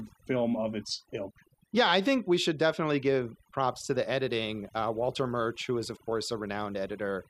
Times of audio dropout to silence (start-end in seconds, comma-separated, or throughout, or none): none